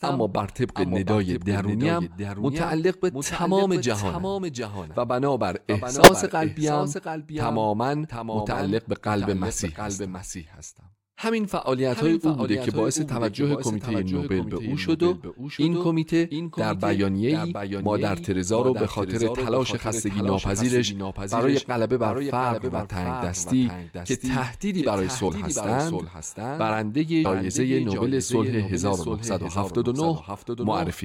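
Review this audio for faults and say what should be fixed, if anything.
A second capture path or a misaligned edit has most likely left the speech mixed in twice. Throughout the clip a full-band copy trails the original by roughly 0.7 s at about 5 dB lower. It has no reverberant tail or room colouring, so it sounds like a second, slightly quieter playback running behind the first, not like an echo. This doubled audio track should be removed by muting the duplicate path or realigning the edit. Prevent it by feeding each source into the mix through exactly one route.

Whole compressed frames were dropped before playback, because they were either missing from the stream or rejected by the decoder as damaged. The audio leaps forward at 2.41 to 2.44 s and at 25.28 to 25.30 s, losing roughly 20 ms each time. At 27.24 s it jumps farther, by roughly 150 ms. These compressed frames skipped are best repaired from a clean copy of the file. 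Prevent them by transferring and storing the encoded audio with error checking so that no frames are lost or rejected.

At 6.04 to 6.08 s the decoder played a frame whose bits had been corrupted. The damage reaches roughly three frames. Misread gains and codes put energy at the wrong frequencies for about that span, and the result is a brief error sound peaking at about −5 dBFS. This corrupt frame decoded should be cut out or concealed. Prevent it by protecting the bitstream with checksums so that damaged frames are caught before they are decoded.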